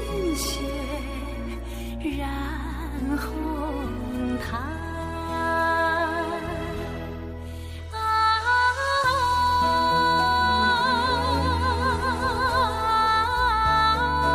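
No technical faults can be heard anywhere in the recording. Nothing interrupts or disturbs the sound at any point.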